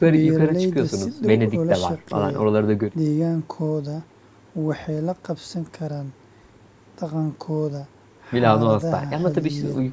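No technical faults are audible.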